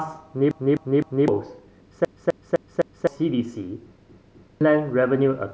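Repeated buffer stutters break up the speech at 0.51 to 1.28 s, 2.05 to 3.07 s and 4.10 to 4.61 s, when fresh audio missed its deadline and the device replayed its last 256 ms block, which fits a 4096-sample buffer. Each block sounds three, four and then two extra times, costing roughly 0.7 s, 1 s and half a second of speech. Unlike an echo, the copies are identical, undecayed and butt-joined with hard seams.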